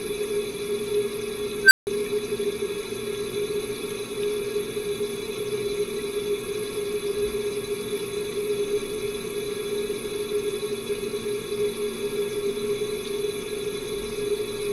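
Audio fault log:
1.63–1.87 s, unstable filter: a recursive filter's feedback ran away, so its output kept growing instead of settling. A tone around 1.5 kHz swells into a loud squeal over 79 ms, clips, then overflows, leaving a 160 ms silence until the filter resets.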